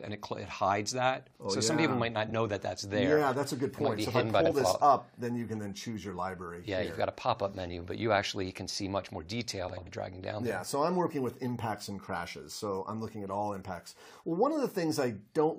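Brief garbled flutters occur at 2.27–2.32 s, 4.41–4.51 s and 9.68–9.88 s. These are frames out of order: two adjacent blocks of 23.2, 46.4 and 92.9 ms swapped places, so each stretch plays its halves exchanged without losing any time.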